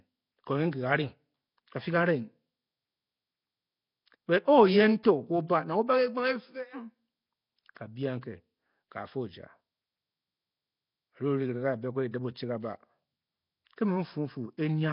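Throughout, the speech sounds rough, hissy and underwater-smeared, with nothing above 5.3 kHz. This is likely Nellymoser compression noise-filling starved bands, fitting about 22 kbps.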